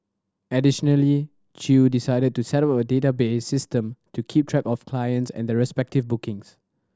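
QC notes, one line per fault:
Nothing stood out on listening to this speech recording.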